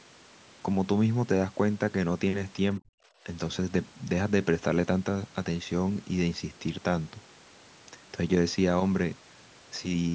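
From 2.79 to 2.97 s the echo canceller likely mistook the talker for loudspeaker echo while both ends spoke, and turned the signal down: speech suppressed in double talk. The speech drops by roughly 40 dB, nearly vanishing for about a fifth of a second.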